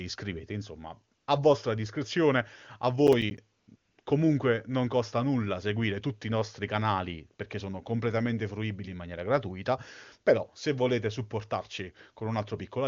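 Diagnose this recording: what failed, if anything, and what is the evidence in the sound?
AMR comfort noise comes from the call processing stage. The phone's discontinuous transmission judged the talker silent and stopped sending speech frames, and the receiver filled each pause with synthetic noise rebuilt from a rough level and spectrum estimate. This happens at 1.17 to 1.27 s (100 ms), just before "a vostra discrezione a", and again in a cluster at 3.59 to 3.67, 3.75 to 3.97 and 4.01 to 4.05 s. In each gap the real background gives way to a smooth, even hiss that switches in and out.

Processor overload crackle comes from the driver and buffer stage. From 3.07 to 3.38 s, right after "a vostra discrezione a", the audio processor missed several delivery deadlines in a row. Each late buffer was replaced by silence with hard edges, and the short dropouts, consistent with a handful of roughly 10 ms buffers, run together into a gritty crackle over the speech. 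The crackle stops once the load clears. Under both faults the speech keeps the full, clear band of a high-rate AMR-WB wideband link.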